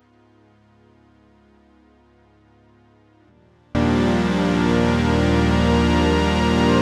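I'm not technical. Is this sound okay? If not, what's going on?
No. From the start to about 3.75 s the music is nearly gone, leaving only a faint trace. That likely comes from one channel inverted: one side of the stereo pair is flipped, so the shared sound cancels when both sides are combined.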